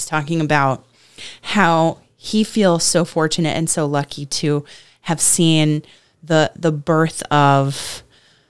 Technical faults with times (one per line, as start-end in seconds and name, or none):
none